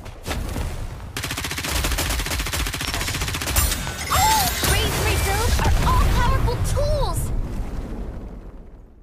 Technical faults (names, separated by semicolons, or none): loud pop